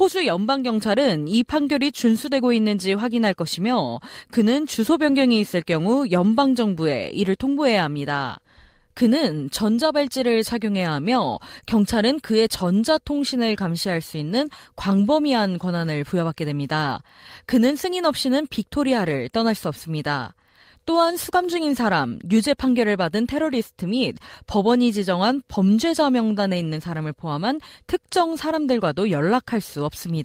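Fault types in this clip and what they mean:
No technical faults can be heard in this speech recording. Nothing in it calls for a fault entry.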